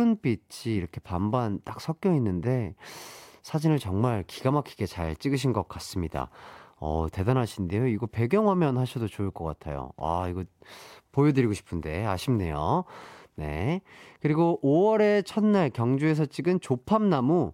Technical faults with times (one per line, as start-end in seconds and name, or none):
none